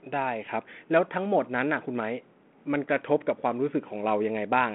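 No technical faults can be heard in the recording. The speech comes over a G.726 ADPCM telephone path at 32 kbit/s, held to a narrow line band of roughly 200 Hz to 3.4 kHz, with only a light graininess from the coding that rises and falls with the level.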